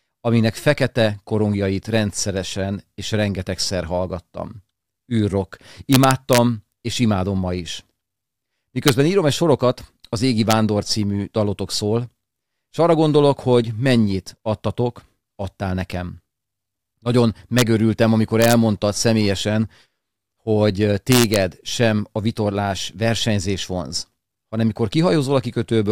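An integer overflow: loud speech peaks pushed a gain stage about 1 to 2 dB past its integer limit, and instead of being held at the limit they wrapped to the opposite sign. Each wrap cracks violently, far harsher than clipping, at 5.93–6.38, 8.88, 10.51, 17.59–17.62, 18.42–18.53 and 21.12–21.36 s.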